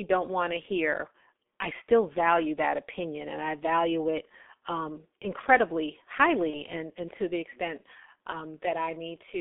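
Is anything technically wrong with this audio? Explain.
Yes, there are two faults.

Throughout, the speech passes through a G.723.1 codec. It runs at a low bitrate, consistent with about 6.3 kbit/s, the band is limited to roughly 250 Hz to 3.6 kHz, and it updates the voice model only slowly. The result is muffled, hoarse speech with smeared consonants and heavy coding damage.

From 6.51 to 6.61 s, between "value it um incredibly" and "and and to the", there is VoIP packet loss concealed by the speech codec. About 30 ms of audio went missing, which fits a single lost frame. The decoder filled the gap by extending its last pitch and filter at falling gain, so the sound is briefly stretched into a fading buzz or coloured noise and stays weakened until the speech recovers.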